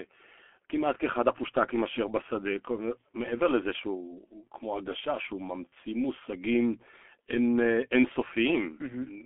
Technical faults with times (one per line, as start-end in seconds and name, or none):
0.00-9.25 G.723.1 codec
5.69-5.73 VoIP packet loss concealed by the speech codec